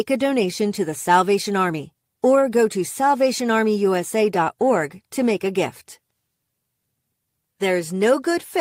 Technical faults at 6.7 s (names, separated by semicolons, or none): none